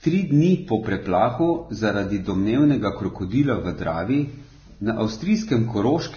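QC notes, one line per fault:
Throughout: likely Vorbis compression, heavy. Nothing above 6.5 kHz; coarse treble quantisation turns detail into grainy hiss, roughening speech and blurring onsets, fitting roughly 17.5 kbps.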